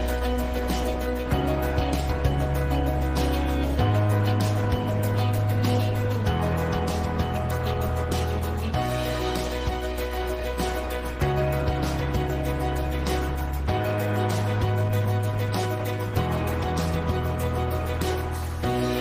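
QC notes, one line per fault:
No faults found in this clip; nothing to log.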